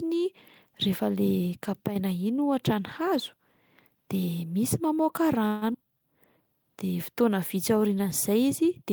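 At 5.47 s the speech holds and buzzes for about 142 ms until 5.65 s, a call audio freeze, likely from delayed packets draining the jitter buffer, then resumes intact. Right after, at 5.74 to 5.77 s, there's a skip ahead: something like 70 ms of speech gets dropped and the two sides butt together almost seamlessly. Then from 5.85 to 6.38 s comes a jitter buffer slow-down, with repeated pitch periods adding 59 ms, so the speech drags at 90% speed without any change in pitch.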